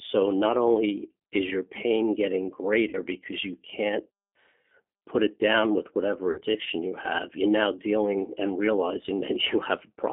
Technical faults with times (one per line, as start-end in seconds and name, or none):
0.00-10.12 G.729 codec
2.89-2.97 VoIP packet loss concealed by the speech codec
6.31-6.42 VoIP packet loss concealed by the speech codec